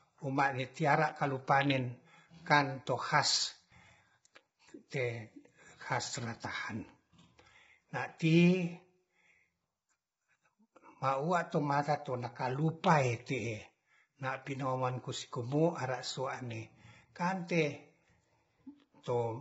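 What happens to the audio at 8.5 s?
At 8.5 s you're hearing the same damage that runs through the whole clip, most likely low-delay AAC compression of the AAC-ELD kind used for video calls. It codes about 500 frequency lines a frame with a low-delay window, and at what sounds like a very low bitrate, around 16 kbps, the speech comes out rough and grainy, with noise filling the gaps between harmonics and the top band cut off at about 7.8 kHz.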